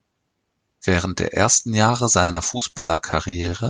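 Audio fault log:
2.23–3.47 s, repeated packet loss (robotic sound): ten gaps in quick succession, the longest 120 ms, each patched by extending the preceding sound, so about 35% of this stretch is concealed. Unlike a slow-down, pieces are actually missing, leaving choppy fragments.
3.38–3.70 s, jitter buffer slow-down: the receiver repeats pitch periods to rebuild its reserve, adding 46 ms and playing at 88% speed. The sound is drawn out at unchanged pitch, stretched rather than chopped, and nothing is lost, which separates it from the packet loss.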